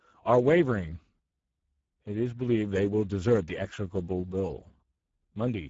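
Speex codec damage runs through the whole speech clip, plainly audible as a hoarse, noisy roughness. This CELP coder had too few bits to model the excitation, which fits a bitrate near 10 kbps, and nothing remains above 7.7 kHz.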